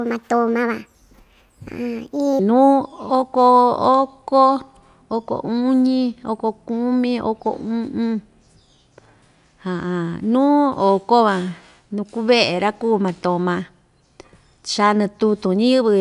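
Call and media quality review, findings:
Speech high-pitched and hurried, 0.00–2.39 s: runs 1.45x fast, pitch raised about 6.5 semitones. Wrong sample rate at the playback stage. Samples are clocked out faster than captured with no conversion, which fits 22 kHz audio played at 32 kHz.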